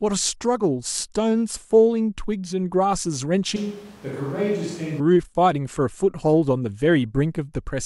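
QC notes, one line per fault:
3.56–5.00 s, switch to a distant microphone: for this stretch the speech suddenly goes roomy and hollow, loses its low end, and drops roughly 5 dB, with room noise coming up to sit only about 20 dB under the voice. Then it snaps straight back. That sounds like the close mic dropped out and a far-off mic, likely the camera's, was covering. The extra distance lets room reflections in and thins the bass.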